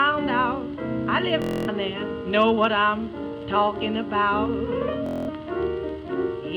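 At 1.42 s a Bluetooth stutter begins. Late or missing packets leave the receiver repeating its last short slice, giving a machine-gun buzz until 1.69 s. The sound resumes further on, about 255 ms skipped. It recurs from 5.06 to 5.29 s, losing about 209 ms.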